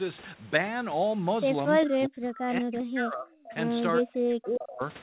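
At 1.81 to 1.88 s and again at 2.75 to 2.79 s there is an echo leak: a faint, delayed copy of the sound arrives about 0.4 s late, quieter the second time. This is likely a loudspeaker echo the far-end canceller missed, not room reverb.

From 1.86 to 3.54 s and 4.0 to 4.82 s, speech is suppressed in double talk, dipping by up to around 40 dB. This is likely the echo canceller ducking during overlap, and it is distinct from packet-loss gaps because the dips follow the overlap.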